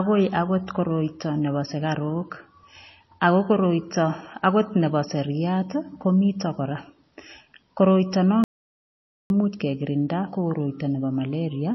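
Throughout this speech recording the sound is dull and watery, with a swirly, metallic edge on sibilants and smeared onsets, and nothing at all above about 5.8 kHz. That hard ceiling and the shimmering texture are the signature of MP3 compression, likely at a very low bitrate, which fits something like 24 kbps. With too few bits the encoder cuts the treble outright and keeps dropping weak frequency components in and out from frame to frame. From 8.44 to 9.30 s the audio dropout to silence cuts the speech off mid-flow and leaves about 0.86 s of silence with no room tone, before the sound resumes abruptly. The likely cause is a momentary loss of the input signal, such as a disconnected device or a failed link, while the recorder kept writing silence, so whatever was spoken in that gap is gone.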